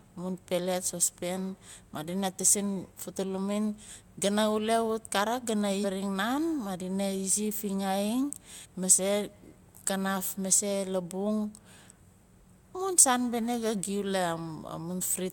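At 5.83 s the speech jumps ahead by roughly 300 ms. At 8.64 s, just before "mase kanaf mase labung", it skips about 150 ms. Both are compressed frames skipped. Whole frames of 23.2 ms went unplayed.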